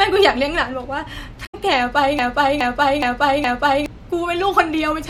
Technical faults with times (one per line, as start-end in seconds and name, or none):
1.45-1.55 damaged data in a compressed stream
2.19-3.86 broken-record loop